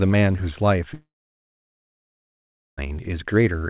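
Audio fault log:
0.94 to 2.79 s, long network dropout: The sound cuts out at 0.94 s. A short buzz carries on from the last sound and fades within about a tenth of a second. About 1.7 s of silence follows. At 2.79 s the sound returns, with roughly 1.84 s gone for good. The likely cause is a network outage, with the receiver stretching the last sound and then giving up. The band stays capped near 4 kHz, which fits a G.711 call codec.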